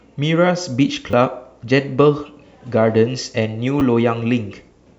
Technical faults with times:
1.11 repeated buffer
3.80 repeated buffer

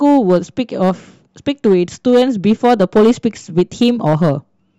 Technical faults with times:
0.00-4.78 hard clipping

